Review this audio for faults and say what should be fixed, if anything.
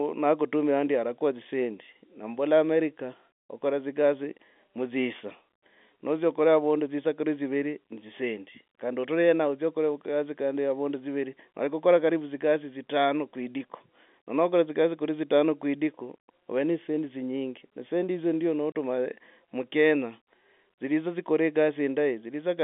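A single packet failed to arrive just after "ne dzisendi hizo ndyo", and the receiver played silence in its place instead of concealing the loss. This packet loss filled with silence cuts a 30 ms hole from 18.72 to 18.75 s, which fits one lost packet. The hard edges of the gap chop the speech, which otherwise sits within the narrow 200 Hz to 3.5 kHz band of the G.711 telephone coding. Enabling packet loss concealment, backed by a jitter buffer or forward error correction, would rebuild the missing audio rather than leave silence.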